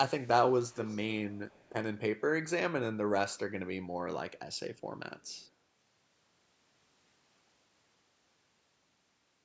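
Echo leak: a faint copy of the speech returns 246 ms late at 0.19–0.29, 0.48–1.06, 1.28–1.72, 4.37–4.6, 4.76–4.81 and 5.19–5.48 s. It is clearest around 0.5–1.1 s and barely audible later, likely residue an echo canceller failed to remove.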